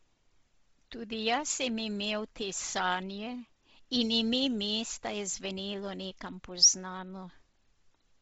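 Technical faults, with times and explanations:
Throughout, Bluetooth LC3 compression: the speech has nothing above about 7.7 kHz, and its upper range sounds breathy and grainy rather than crisp, with heavy codec damage across the whole clip. This is likely LC3 at a low bitrate, consistent with about 24 kbps and 7.5 ms frames. At that rate the encoder zeroes much of the top band and replaces it with shaped noise, so sibilance and consonant edges become hissy texture instead of clear detail.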